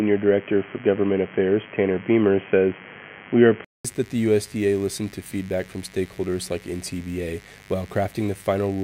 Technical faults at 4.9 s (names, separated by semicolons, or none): mains buzz